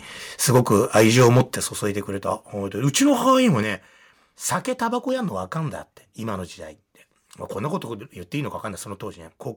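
From 0.49 to 1.41 s the speech shows microphone overload: the loudest syllables carry a harsh, crackling edge where their peaks are flattened. The likely cause is an input level set so high that the signal drove about 6 dB past the converter's ceiling, so the tops of the waveform were sliced off on a small but audible share of samples. The distortion tracks the louder moments rather than sitting under the whole passage.

Layered over and after that stretch are three abrupt drops in overall level, consistent with the microphone volume being stepped down. The first, at 0.56 s, is a modest fall of about 2 dB. The second, at 1.56 s, just after the overloaded passage ends, is a much clearer cut of about 7 dB. The third, at 3.63 s, takes off about another 6 dB. Each is likely the call software reacting to a hot or clipping input by lowering the device gain in a single jump. Speech and background fall together at each step, with no fade.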